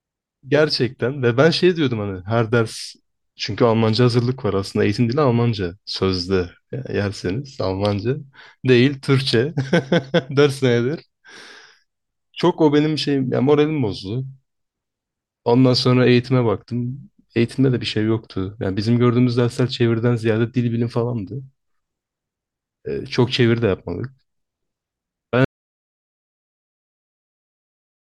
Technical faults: audio dropout to silence

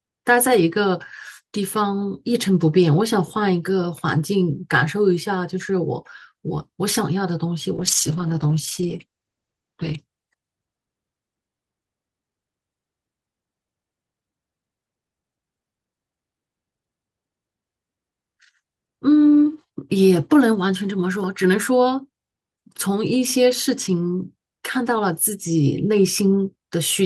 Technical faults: call bitrate drop

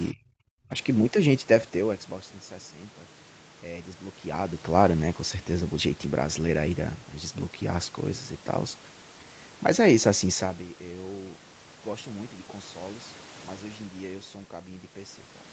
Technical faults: speech suppressed in double talk; zipper noise

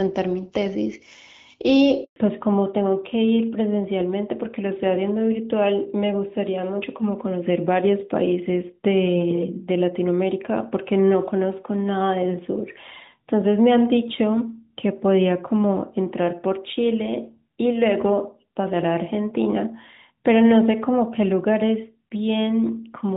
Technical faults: handover gap; fallback to narrowband

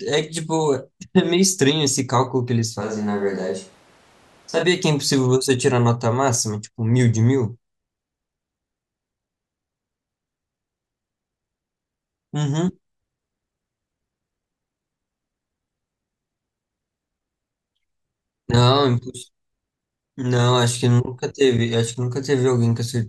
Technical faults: switch to a distant microphone

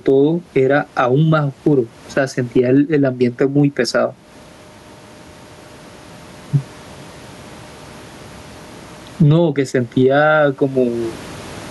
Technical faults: gain pumping

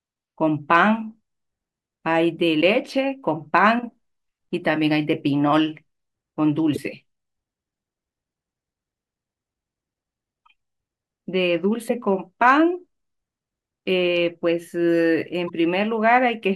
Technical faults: damaged data in a compressed stream

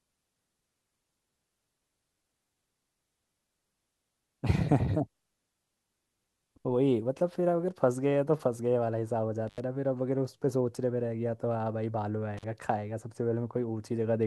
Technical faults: intermittent contact

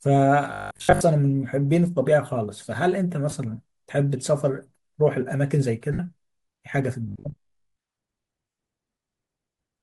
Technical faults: Bluetooth LC3 compression; robotic sound from repeated short buffers; lost LE Audio frames

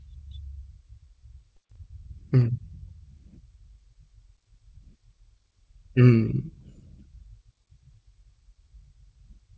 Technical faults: none

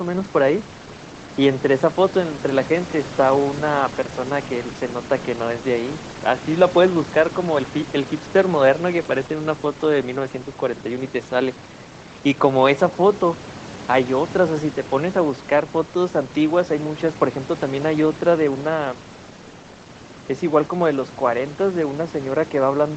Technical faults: none

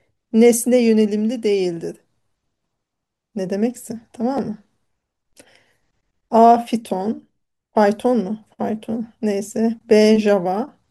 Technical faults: repeated buffer

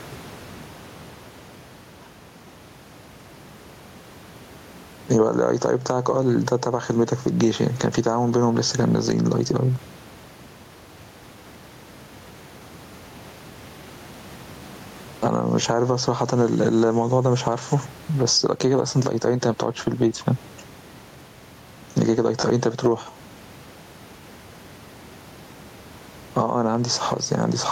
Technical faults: gain pumping

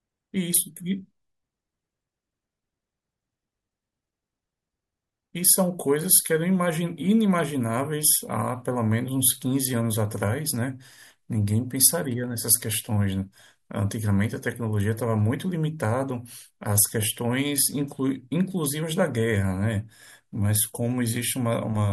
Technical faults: none

